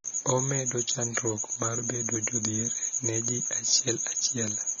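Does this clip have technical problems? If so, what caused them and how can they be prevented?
Yes. Throughout the speech the sound is dull and smeared, with nothing above 6.9 kHz and a plainly audible warbling, fizzy texture on sibilants. This is likely AAC compression, where a low bitrate, consistent with about 24 kbps AAC-LC, forces a lowered cut-off and coarse quantisation of the spectrum. To prevent it, export at a higher bitrate or keep a lossless copy.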